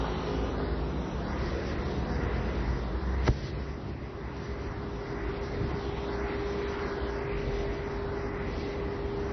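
From start to finish, nothing reaches above 6 kHz, and the sound has a watery, swirling texture, with metallic chirps on bright, hissy parts and smeared attacks. This is likely MP3 compression at a very low bitrate: short of bits, the encoder cuts the top off and zeroes weak frequency lines, which flicker on and off between frames. On a spectrogram that shows as a hard ceiling at 6 kHz with patchy, blocky holes below it.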